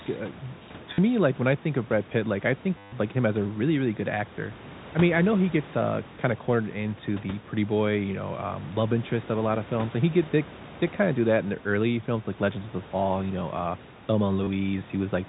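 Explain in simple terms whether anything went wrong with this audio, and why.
Three short glitches in this speech come from packet loss with the last packet repeated. The first runs from 0.94 to 0.98 s, the longest from 2.78 to 2.92 s, and the last from 14.44 to 14.47 s. Each time audio went missing, the receiver replayed the most recent chunk until fresh audio arrived. The 140 ms gap makes a brief robotic buzz that fits 10 ms packets, and the shorter ones sound like a quick stutter.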